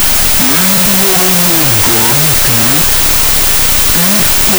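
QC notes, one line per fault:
Throughout: wrong sample width. The 32-bit float data are read as 16-bit integers, so every sample splits into two values. Playback runs at half speed, an octave low, with the speech buried under loud broadband noise. The spectrogram is a dense noise wash with faint, compressed harmonics.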